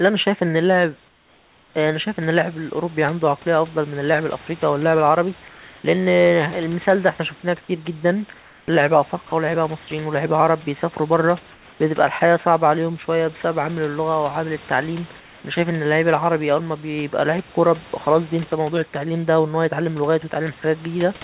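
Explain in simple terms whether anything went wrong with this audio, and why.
In three speech pauses, at 1.08 to 1.74 s, 8.4 to 8.68 s and 15.2 to 15.44 s, the real room background gives way to a smooth, slightly quieter hiss. This is likely comfort noise in place of the background: the sender paused transmission, and the receiver filled the gap with synthetic noise. It differs from a dropout because the pause never goes fully silent.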